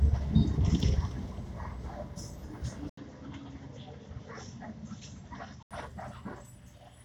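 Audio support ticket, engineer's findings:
Sound goes dull and boxy at 2.89 s, clearing again at 5.71 s. An 80 ms gap at the switch. Nothing above 7.6 kHz, level drops a little, new noise floor well below. Likely input switched to a poorer device, narrower band.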